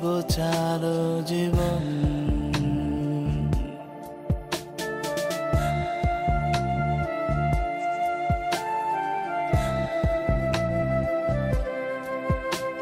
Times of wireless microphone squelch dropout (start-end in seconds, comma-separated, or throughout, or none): none